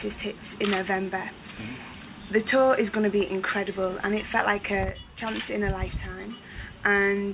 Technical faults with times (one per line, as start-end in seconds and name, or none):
none